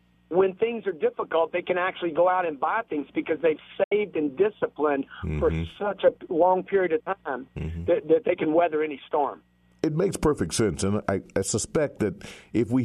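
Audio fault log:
3.83–3.92 s, digital broadcast dropout: the sound fades out over about 8 ms and falls to silence, leaving a gap of about 72 ms before the programme resumes mid-stream rather than where it stopped. The receiver stopped getting decodable data, either because the signal was lost or because frames failed their checksum, so it muted until valid frames arrived. The hole's length fits roughly three lost frames, and whatever was transmitted during it is gone.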